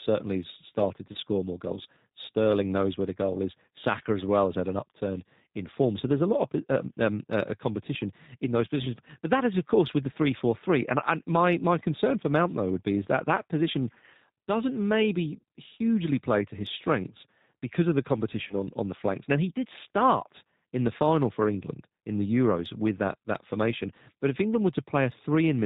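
G.729 codec coding runs throughout. The voice is rebuilt from a vocal tract filter and sparse pulses, with nothing above 4 kHz, giving plainly rough, synthetic speech consistent with 8 kbit/s G.729A. VoIP packet loss concealed by the speech codec occurs at 1.13 to 1.17 s, between "has started to" and "score more goals", and at 18.48 to 18.54 s, between "strengths because of the" and "on on the flanks". Each gap fits a single lost 20 ms packet. The decoder extends the previous frame into a brief, fading smear, and the voice stays weak or distorted just afterwards.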